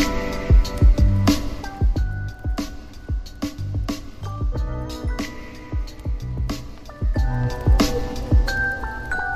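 There's zipper noise in two spots. From 1.42 to 2.21 s the level drops by roughly 10 dB, and it does it in 1 dB jumps about ten times a second, so you hear a fine ticking riding on the sound. From 7.00 to 7.53 s it comes back up by about the same amount, now around twenty steps a second. Each unsmoothed 1 dB step puts a small click into the waveform.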